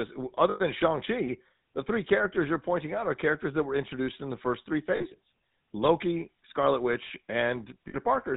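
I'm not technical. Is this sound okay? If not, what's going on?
No. The speech went through the old GSM full-rate codec used in early mobile phones, which cuts everything above 4 kHz and rebuilds the voice roughly, so it sounds buzzy and gravelly throughout.

There are also three moments of lost GSM frames, where pieces of the signal went missing and the last good sound was repeated: at 0.5 to 0.61 s (about a tenth of a second), at 4.96 to 5.06 s right after "in the first three", and at 7.88 to 7.95 s. Each one comes out as a brief metallic ringing smear.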